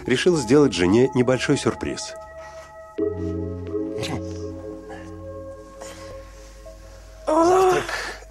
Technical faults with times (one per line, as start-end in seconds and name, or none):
6.11-6.13 damaged data in a compressed stream